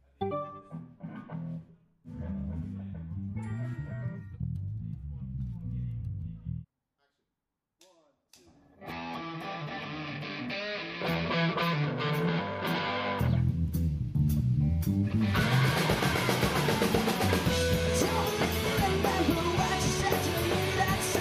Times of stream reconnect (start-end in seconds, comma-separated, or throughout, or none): none